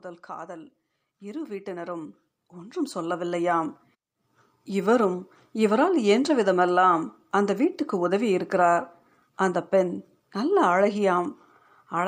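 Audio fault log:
0.26–3.77 s, automatic gain rising: the gain control judged the input too quiet and climbed about 14 dB over three and a half seconds, so the speech and background swell together. The waveform envelope and noise floor ramp upward, and the spectrogram brightens evenly across all frequencies.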